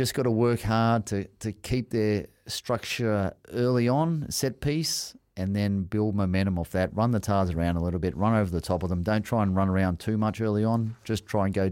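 A speech recording with no audible technical faults anywhere in the signal.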